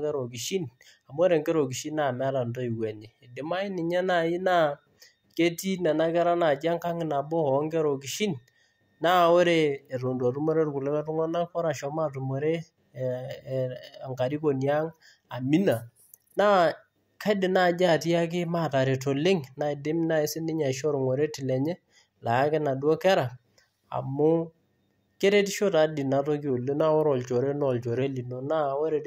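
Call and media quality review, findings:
Speech drops flat by about a semitone (−105 cents) and slows 5.9% at 9.96–11.51 s, 15.42–16.08 s and 26.50–28.02 s, then snaps back. Likely a drift correction step in the clock-sync resampler: the playback rate is stepped down to refill the buffer. Unlike wow or flutter, the shift is abrupt with flat plateaus, not gradual or periodic. Pitch and tempo move together, which rules out pitch-only processing.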